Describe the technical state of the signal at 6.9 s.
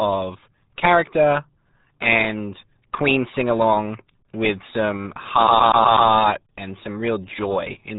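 At 6.9 s the speech carries RealAudio 14.4 codec damage, as it does throughout the clip. The codec keeps nothing above about 3.8 kHz. Its very low bitrate, which fits the 8 kbit/s dial-up format, leaves the speech muffled and heavily gargly.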